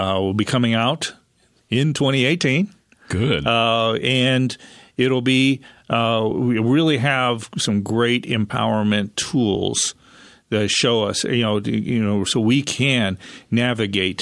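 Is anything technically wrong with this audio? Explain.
No, no technical faults detected.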